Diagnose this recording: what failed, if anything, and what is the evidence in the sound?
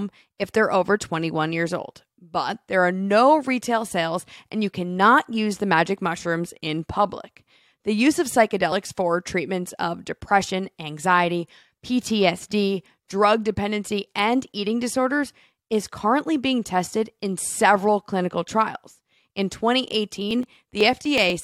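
A short glitch at 8.71 s, between "use of" and "for treatments of depression", points to damaged data in a compressed stream, a fault at the codec and storage stage. The blip lasts about 14 milliseconds. Some bytes of the encoded file were corrupted, so the decoder misread the frame there, lost sync and resumed at the next valid frame header, skipping a sliver of audio.

Near the end, from 20.31 s to 21.30 s, a row of small ticks repeats every 124 ms, about ten in all. These are periodic USB or driver dropouts at the driver and buffer stage. Something blocked the audio path at a fixed interval, and each time roughly a millisecond of signal was skipped outright rather than filled with silence. The splice causes a waveform discontinuity, which is heard as a click riding on the speech.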